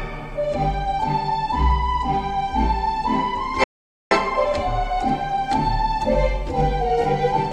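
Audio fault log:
3.64 to 4.11 s, audio dropout to silence: the sound cuts off abruptly and returns after about 0.47 s of silence with no room tone, unlike a gate or fade that keeps some noise. The likely cause is input briefly lost while recording continued.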